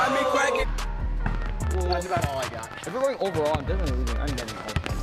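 From 1.35 s to 4.85 s, a train of clicks sits over the sound. About fifty similar pops arrive unevenly, around 13.2 per second, peaking about 10 dB above it. Likely interference.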